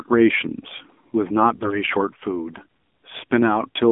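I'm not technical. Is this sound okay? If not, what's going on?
No. The whole speech clip has gone through the AMR narrowband mobile codec, the old phone-call compression. It sounds thin and muffled, like a phone line, because everything above about 3.5 kHz is gone, and squeezing it this hard leaves the speech audibly buzzy and artificial throughout.

From 1.56 to 1.79 s there are AMR bit errors. Some of the compressed data arrived scrambled, so the speech turns hoarse, scratchy and gargly for that quarter second while keeping its pitch and loudness. Unlike a dropout, the sound never goes silent or cuts out.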